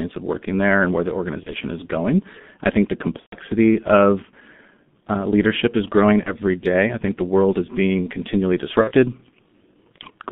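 G.723.1 codec throughout: this speech is squeezed through a roughly 6.3 kbit/s coder working in 30 ms frames, with the band cut to 150 Hz to 3.6 kHz. The heavy coding makes the voice muffled and hoarse, and the consonants smear together.

VoIP packet loss concealed by the speech codec at 1.44 to 1.54 s (after "there and where the", before "is going I think"), 3.20 to 3.35 s, 6.23 to 6.35 s (after "uh leadership is growing", before "day I think the") and 8.81 to 8.92 s (after "world is being continually"). The missing audio spans are about 30, 120, 30 and 60 ms, which fits whole 30 ms frames going missing. Each time, the decoder fills the gap by stretching its last pitch and filter with falling gain. That produces a short buzzy or noisy fading smear, and the voice stays weak for a moment after the stream resumes.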